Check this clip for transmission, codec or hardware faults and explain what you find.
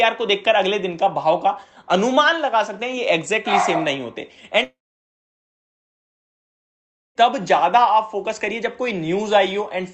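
One transmission fault stands out: a long network dropout from 4.63 s to 7.18 s. This is likely a network stall that left about 2.5 s of audio undelivered. The receiver briefly extends the last sound as a fading buzz or hiss, then leaves about 2.4 s of silence before the audio resumes with that stretch missing. The decaying concealment tail separates it from a hardware mute or hard cut, and its length separates it from brief packet-loss clicks. The call codec's top end stops near 8 kHz, which fits Opus at about 32 kbps.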